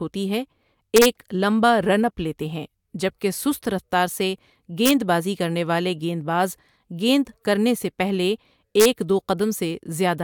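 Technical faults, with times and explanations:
0.96–1.06 s, 4.86–4.91 s (after "کہ سست رفتار سے", before "بازی کرنے والے گیند") and 8.80–8.85 s (after "گیند کرنے سے پہلے"), integer overflow: loud speech peaks overshoot the integer limit by about 1 to 2 dB and wrap to the opposite extreme instead of being held. Each wrap is a violent crack, far harsher than the flattened buzz of clipping.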